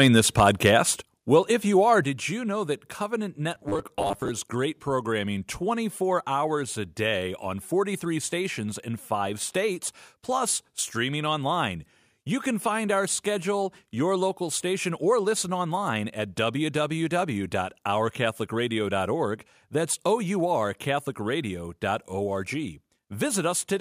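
From 0 to 0.66 s the peaks are flattened with a harsh crackle, likely microphone overload: input gain about 4 dB too hot, clipping a small fraction of samples.

At 1.02 s and again at 2.04 s the whole level drops by about 5 dB in a single step, likely the microphone volume stepped down automatically after the clipping.

From 3.55 to 4.30 s the speech becomes a rigid metallic buzz at 100 Hz, likely robotic sound from repeated short buffers. This fits a 10 ms block being replayed for around two fifths of that span.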